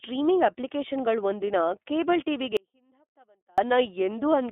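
Throughout, the speech has passed through the iLBC codec, which codes each short frame independently and discards everything above 3.8 kHz, leaving it narrowband, slightly rough and synthetic. From 2.57 to 3.58 s, the wanted signal was likely lost upstream while the path stayed open. This audio dropout to a faint residue cuts the speech abruptly for about a second, leaving only a very faint trace far below normal level.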